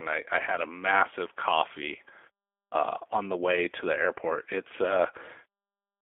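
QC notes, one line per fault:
throughout, G.729 codec: speech confined to roughly 300 Hz–3.5 kHz, plainly rough and synthetic, because each 10 ms frame is rebuilt from a vocal tract filter, pitch predictor and sparse pulses rather than the waveform, which fits an 8 kbit/s G.729A stream.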